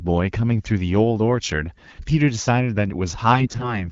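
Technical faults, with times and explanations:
3.32 to 3.92 s, AMR bit errors: over the last six tenths of a second the speech turns hoarse and scratchy, with a gargling edge, while its pitch and loudness stay roughly where they were. Roughly a tenth of the weakly protected bits in about 17 frames arrive flipped. The checks on the core bits still pass, so each frame is decoded rather than dropped. That misplaces the excitation pulses and skews fine pitch, gain and spectral values. The result is roughness, not the gaps or repeated fill of lost frames, heard over the lightly coded 12.65 kbit/s wideband AMR underneath.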